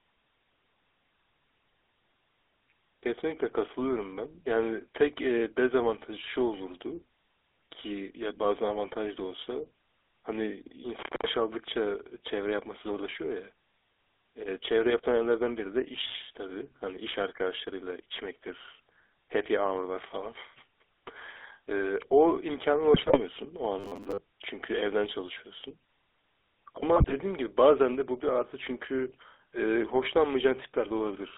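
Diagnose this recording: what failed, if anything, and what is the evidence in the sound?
The whole call runs through the GSM full-rate codec, with a 300 Hz to 3.6 kHz band and a buzzy, gravelly roughness from its pulse-driven vocal-tract model. It's plainly audible throughout.

At the analogue wiring there's an intermittent contact from 10.99 to 11.30 s. The line opens for about 194 ms, dropping out with crackle at each edge.

Over the radio link, GSM bit errors hit from 22.94 to 23.20 s and again from 26.96 to 27.13 s. Corrupted filter, pitch and gain values make the speech squawk, pop and gargle.

From 23.80 to 24.19 s the voice turns into a rigid, metallic 100 Hz buzz, likely robotic sound from repeated short buffers. Roughly half the audio is replaced by 10 ms repeats.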